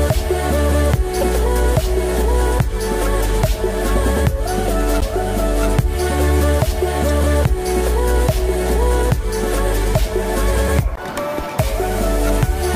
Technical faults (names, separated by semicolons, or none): damaged data in a compressed stream